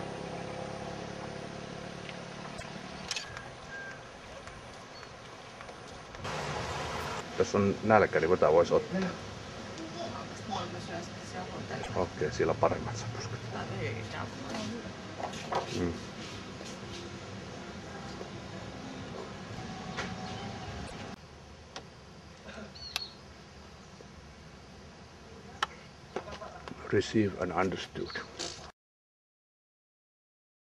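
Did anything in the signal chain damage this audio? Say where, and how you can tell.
Yes, at the codec stage. The audio skips ahead with a brief chirp, noise burst or hole at 2.58–2.63, 11.82–11.89 and 20.86–20.93 s. This is likely a broken MP3 bit reservoir. Frames after a cut borrow bytes from the wrong earlier frames.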